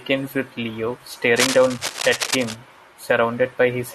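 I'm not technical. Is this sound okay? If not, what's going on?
No. From about 1.36 to 2.56 seconds, a burst of rough scratching and rustling sits over the speech, nearly as loud as the speech itself. This is cable scratch noise. It is likely caused by a worn cable, plug or knob being moved during recording: the electrical contact flickers between good and bad, and each flicker adds a small crackle. Over that second or so, many crackles pile up into this scratchy layer.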